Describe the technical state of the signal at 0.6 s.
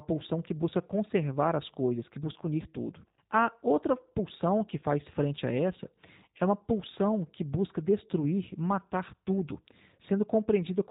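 At 0.6 s, as throughout the clip, the speech has been squeezed through a G.729 codec at a rate that fits 8 kbit/s. It was rebuilt from a coarse vocal-tract model and a few excitation pulses per frame, with nothing above 4 kHz, so it sounds narrow, grainy and plainly artificial.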